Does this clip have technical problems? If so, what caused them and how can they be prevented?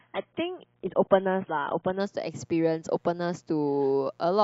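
Yes. A mains buzz runs through the whole clip. It sits well below the speech, roughly 40 dB down. Its harmonics are spaced at 60 Hz, so the supply is a 60 Hz one. Sharp switching spikes from a dimmer, a rectifier or an unshielded cable got into the signal path twice per mains cycle. That is why it sounds raspy rather than like a pure hum. Prevent it by using shielded, balanced cabling and keeping audio lines away from dimmers and switching supplies.

The clip also shows an adaptive stream starting at a low bitrate. From 0.0 to 2.0 s, nothing is heard above 3.8 kHz. The speech sounds dull, and codec artefacts are stronger. At 2.0 s the treble returns suddenly, with no gap. The sound of the opening points to a very low-bitrate AAC version, around 16 kbit/s, that stepped up to around 96 kbit/s once the player had measured the connection. Prevent it by starting playback at a higher-bitrate version, or by buffering briefly before starting.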